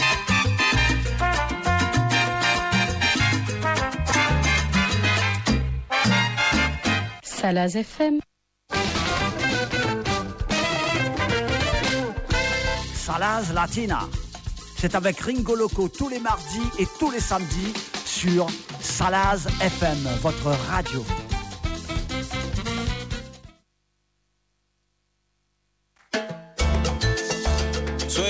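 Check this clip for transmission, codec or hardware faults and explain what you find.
Two transmission faults turn up, both early in the clip.

At 4.12 to 4.14 s there is a skip ahead: roughly 0.4 s of sound was dropped and playback jumped forward with no fill, so the two sides are butted together. On a waveform it shows as an abrupt seam with no silent gap.

From 5.38 to 5.82 s there is a jitter buffer speed-up: to cut excess delay, the buffer trimmed pitch periods, around 70 ms in total. The sound runs at 112% speed with unchanged pitch and feels hurried, and a spectrogram shows compressed timing with harmonics at the same height.

Across the whole clip the call codec leaves nothing above 8 kHz, which fits G.722.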